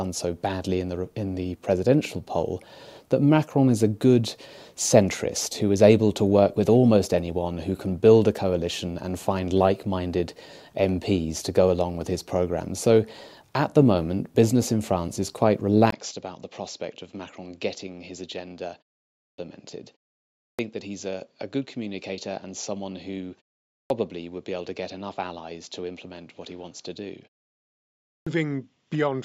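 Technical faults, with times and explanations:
15.9 s to end, input switched to a poorer device: after a 20 ms gap the sound turns dull and about 10 dB quieter, likely a band-limited microphone; spectrograms show a hard ceiling at 7.6 kHz and a new noise floor about 45 dB down.
19.15, 20.37, 23.69 and 28.06 s, clipped start after a pause: after pauses of 0.36 to 0.86 s, the first 0.21 to 0.23 s of sound is lost while the output wakes. Waveforms jump from flat silence straight into speech.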